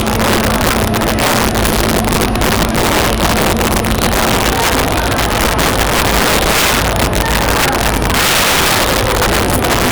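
A recording of sounds suffers integer overflow throughout: with the signal pushed about 11 dB too hot, loud peaks exceed the largest integer and wrap to the opposite sign rather than being limited. Roughly 7 percent of samples flip across the full range, producing harsh, violent cracks on the loudest moments, far sharper than ordinary clipping.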